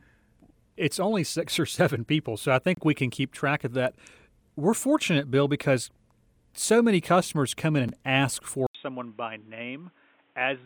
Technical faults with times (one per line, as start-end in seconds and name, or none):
2.75-2.77 gap at a join of encoded pieces
7.89 gap at a join of encoded pieces
8.67-10.66 input switched to a poorer device